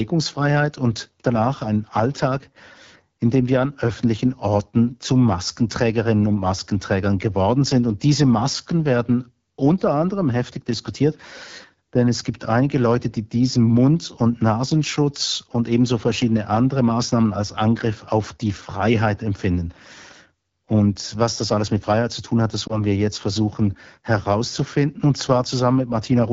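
Right from the start, the speech has the AMR wideband (HD Voice) codec's rough, raspy edge. The detail up to 6.4 kHz is coded sparsely, with noise filling the top band, and the damage is plainly audible. That fits the low 8.85 kbit/s mode rather than the clearer higher rates.

Around 22.68 to 22.84 s there's a lost AMR speech frame, just a single 20 ms frame. The decoder bridges the gap by reusing the last good settings at lower gain, so you hear a brief dip or warble before the speech settles back.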